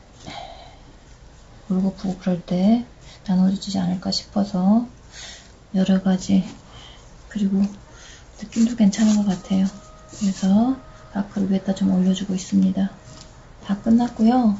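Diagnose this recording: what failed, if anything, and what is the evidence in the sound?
Nothing in the chain failed: no dropouts, discontinuities, level anomalies or timing errors are audible at any point in the recording.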